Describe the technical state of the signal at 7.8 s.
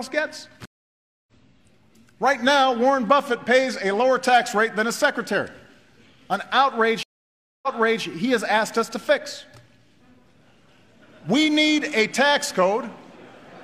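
A stream reconnect spans 7.03 to 8.04 s. The connection dropped and the player went silent for 0.6 s, then restarted its decoder mid-stream. The server resent earlier data, so the audio resumes about 0.42 s behind where it stopped and briefly repeats.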